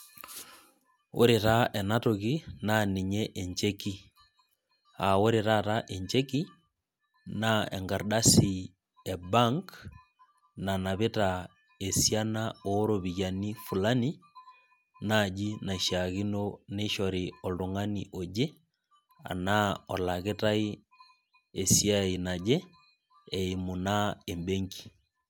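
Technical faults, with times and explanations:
No technical faults are present anywhere in the speech recording.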